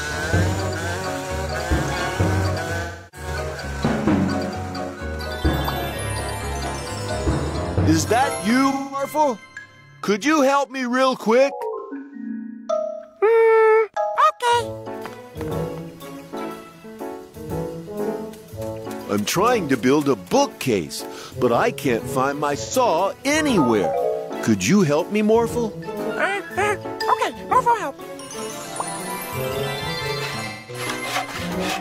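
AAC frame loss with concealment occurs five times: at 2.82 s, 8.71 s, 11.78 s, 22.56 s and 30.44 s. Each time the decoder was missing audio and rebuilt it from the last good spectrum. The gaps are about 300 ms, 210 ms, 300 ms, 85 ms and 210 ms. The one at 11.78 s is broken up over 340 ms, with its longest stretch near 150 ms. Each patch sounds smeared, noisy or phasey.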